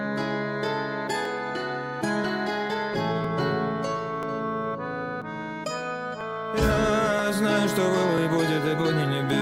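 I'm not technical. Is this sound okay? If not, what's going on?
No. Tiny clicks or skips at 1.25, 3.24, 4.23, 5.22, 6.21, 7.19 and 8.18 s come from overlap between stream segments: the one-second pieces were joined with a few milliseconds of sound trimmed away.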